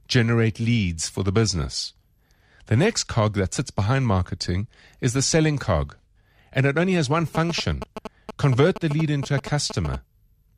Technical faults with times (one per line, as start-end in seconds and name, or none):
7.35-9.96 GSM signalling bursts